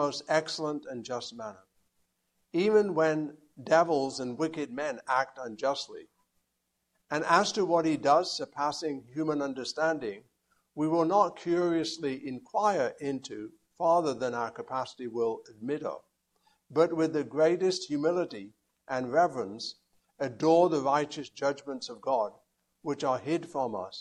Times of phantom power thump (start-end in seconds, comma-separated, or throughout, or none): none